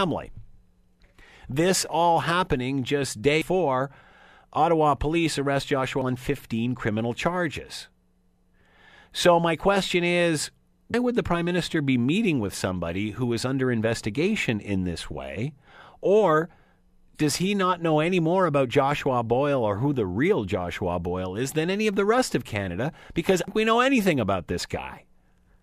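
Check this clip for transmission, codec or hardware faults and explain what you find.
The clip has one kind of fault, damaged data in a compressed stream, at 1.0, 3.42, 6.02, 10.94 and 23.48 s. At each point corrupted bytes break decoding, so the decoder loses frame sync and hunts for the next header, producing a brief chirp or blip in the speech.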